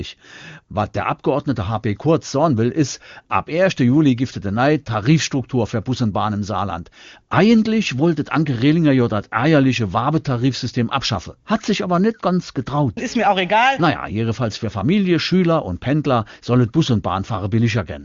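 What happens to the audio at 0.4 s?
Nothing goes wrong at 0.4 s: the speech there is intact, carried by an AMR wideband (HD Voice) link at 23.85 kbit/s with only faint coding damage at most and a band that stops around 7.2 kHz.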